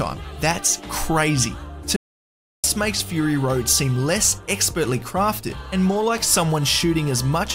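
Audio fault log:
1.96–2.64 s, audio dropout to silence: the sound stops abruptly in mid-flow and the track falls to silence for about 0.67 s, with no room tone or background hiss underneath, before the audio cuts straight back in partway through. That dead, silent gap is the mark of the input being lost while recording carried on, likely from a momentary disconnection or mute, so whatever occurred during those 0.67 s is gone.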